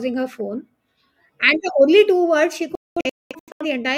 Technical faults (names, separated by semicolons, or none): digital broadcast dropout